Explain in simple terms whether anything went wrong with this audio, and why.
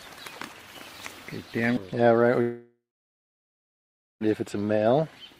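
At 2.41 s the sound becomes a fading buzz, then silence until 4.23 s. This is likely a long network dropout. About 1.8 s is lost.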